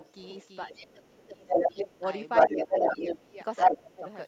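The doubled audio track runs throughout. A full-band second copy trails by roughly a third of a second, a bit quieter and dry, likely from a slower capture path.

From 0 to 0.48 s, the other side's voice leaks through, faint, far below the speech. An echo canceller likely missed loudspeaker sound reaching the microphone.

From 0.68 to 2.05 s, speech is suppressed in double talk. The talker dips by up to about 20 dB, for about a second in all. Both sides likely spoke at once, and the canceller turned everything down.

Leakage returns from 1.25 to 1.83 s, now louder than the speech. It comes back from 2.35 to 3.21 s, again above the talker.

Suppression recurs from 2.47 to 3.37 s, with dips of about 10 dB. Leakage surfaces briefly from 3.56 to 3.75 s. A final suppression, up to about 20 dB deep, follows from 3.71 to 4.05 s.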